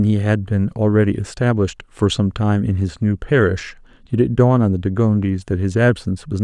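No technical faults can be heard anywhere in the recording.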